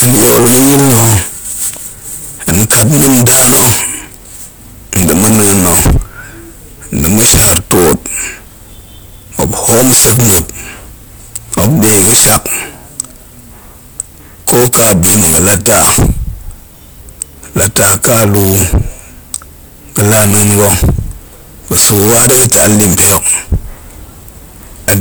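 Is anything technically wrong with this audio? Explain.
Yes. Throughout the speech there is a harsh, buzzing fuzz on every loud stretch, not just occasional crackle on the strongest peaks. This is hard clipping from severe overload: the signal was driven about 44 dB past what one stage could pass, so nearly a third of the samples hit the limit and had their tops sliced flat. Those flattened peaks spray harmonics high into the spectrum, giving the persistent fuzz.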